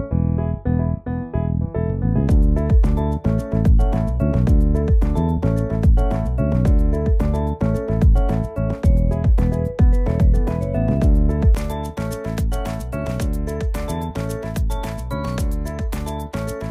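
From 0.0 to 11.55 s, de-emphasis applied wrongly cuts treble, sloping about 11 dB down at 10 kHz relative to 1 kHz. The sound turns dull and muffled, but the roll-off is gradual, unlike a low-pass filter's sharp cutoff.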